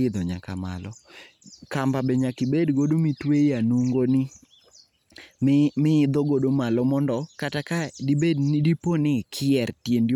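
No technical faults are audible anywhere in this speech recording.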